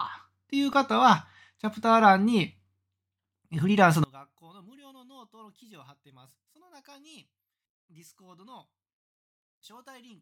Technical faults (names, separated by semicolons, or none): one channel inverted